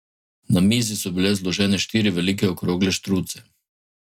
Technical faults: none

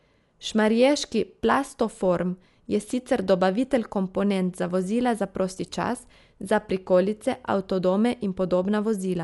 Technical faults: Dolby Digital compression

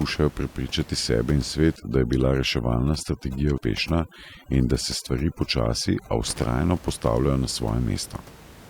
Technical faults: overdone noise removal; compressed frames skipped

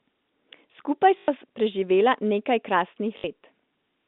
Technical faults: packet loss with last packet repeated

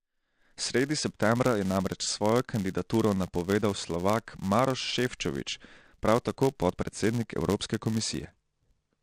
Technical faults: filter restarted on every block

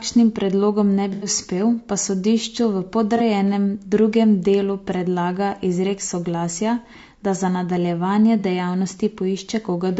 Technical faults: low-delay AAC compression; AAC frame loss with concealment

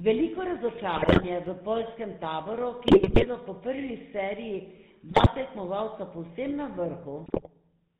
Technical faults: GSM full-rate codec; GSM bit errors

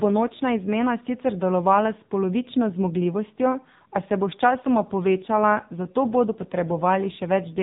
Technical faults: AMR narrowband mobile codec

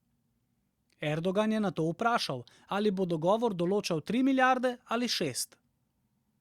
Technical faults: none

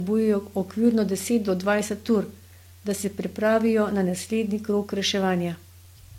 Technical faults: transcoding between lossy codecs

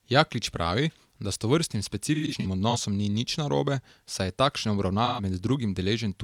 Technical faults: AAC frame loss with concealment

